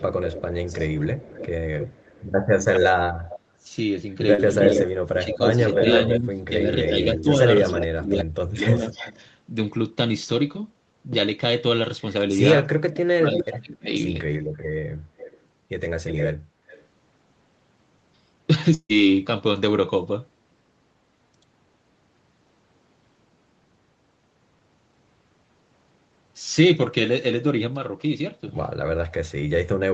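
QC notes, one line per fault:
0.00–3.40 s, 4.54–9.27 s, 13.32–16.84 s: echo leak. A delayed copy of the talker returns about 0.31 to 0.33 s late, ranging from about 10 dB below the direct sound to roughly equal level, likely from a far-end loudspeaker whose echo canceller let part of the pickup through.
0.78–1.15 s, 4.74–8.86 s, 12.76–13.90 s: speech suppressed in double talk. The talker dips while both sides are active, by roughly 10 dB in the first span and up to about 35 dB and 25 dB in the later two, likely because the echo canceller cannot separate local speech from echo and attenuates both.
4.34–4.41 s: short concealed packet loss. About 40 ms of audio failed to arrive and was synthesised by extending the preceding sound before crossfading back, which is heard as a brief smear in the signal.
18.74–18.92 s: long network dropout. About 160 ms went missing. Roughly 150 ms was bridged with a decaying continuation of the last sound, followed by about 70 ms of silence before audio resumes with that section lost, likely from a network interruption.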